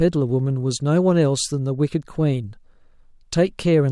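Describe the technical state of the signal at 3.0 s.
The signal at 3.0 s is intact, with no fault audible in the speech at that moment.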